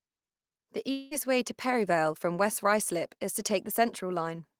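A long network dropout is the likely cause at 0.91 s, where the stream stops delivering audio for roughly a fifth of a second. The receiver fills the gap by stretching the last received sound into a fading buzz or hiss that lasts about 196 ms, so the speech never drops to silence. About 200 ms of the original speech is lost, and the talker returns at 1.14 s on "way to", with the missing portion simply gone.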